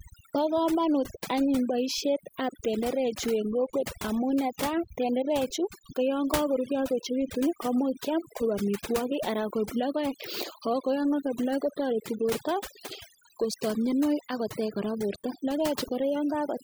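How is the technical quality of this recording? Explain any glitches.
The big issue here is overdone noise removal, and it runs through the whole clip. A noise reduction stage was pushed way too hard, so any frequency band sitting close to its idea of the noise floor gets pulled right down or switched off, and the quieter bits of the speech get dragged under with it. You hear it as a background that drops away and breaks up into little twinkly, warbling specks.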